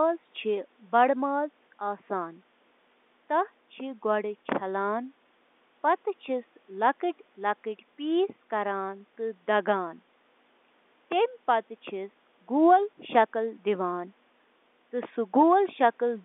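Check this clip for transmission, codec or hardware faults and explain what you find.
No faults detected.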